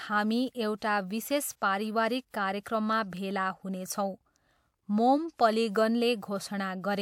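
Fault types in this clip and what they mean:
Pre-echo: the transform codec spread each block's quantisation noise across the whole block, so noise sized for a sharp attack late in the block leaked into the quiet stretch before it. Here that leaves a short hiss ahead of two speech onsets, about 45 ms from 0.78 to 0.82 s just before "विशेष परिवारिक", and about 38 ms from 2.30 to 2.34 s just after "विशेष परिवारिक", softening and smearing each attack.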